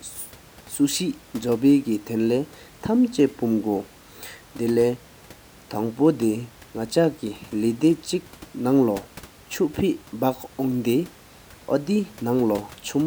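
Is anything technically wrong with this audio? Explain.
No, nothing in this speech recording points to a technical fault. A low background of room noise sits about 25 dB below the speech, and that belongs to the space where the microphone was, not to the system.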